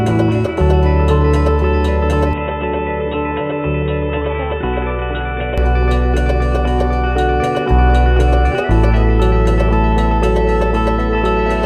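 From 2.33 to 5.58 s the sound narrows to nothing above 3.8 kHz, drops roughly 5 dB and gains faint new noise, likely an input switched to a poorer device.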